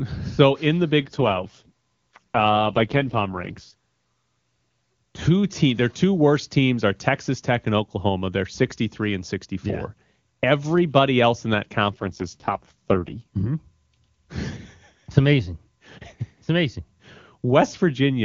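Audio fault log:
1.00–3.73 s and 11.90–13.22 s, AMR rate drop: after "in the" and "else in that", the speech turns rough, raspy and synthetic with no gap or narrowing, then clears. This fits AMR-WB falling from 23.85 to 6.6 kbit/s, spending bits on error protection.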